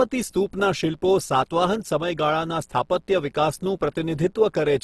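A steady mains buzz runs under the speech for the whole clip. Spiky interference on a 60 Hz supply leaks into the signal twice per cycle. Its harmonics stack into a raspy drone. It sits roughly 40 dB below the speech.

The speech also sounds grainy and rough throughout. Tonal parts turn noisy rather than swirly. Nothing is present above 12.1 kHz. This is likely Opus compression in its music mode, starved of bits. The damage fits a low rate near 16 kbps.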